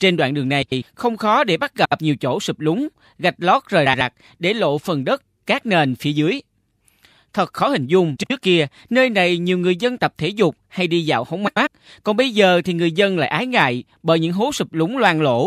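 Speech with frames out of order at five points: neighbouring runs of coded frames reached the decoder swapped, so each short stretch plays its two halves in reverse sequence. Around 0.62–0.82 s and 11.47–11.67 s the swapped blocks are about 96 ms each, fitting runs of four 24 ms frames. At 1.84–1.99 s, 3.86–4.01 s and 8.16–8.31 s they are about 72 ms, fitting three. Each sounds like a brief garbled flutter, and no time goes missing.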